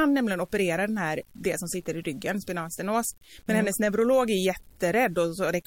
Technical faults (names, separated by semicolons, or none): low bit depth without dither